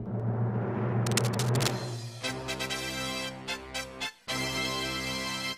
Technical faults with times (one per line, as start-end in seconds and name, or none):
1.06-1.71 cable scratch noise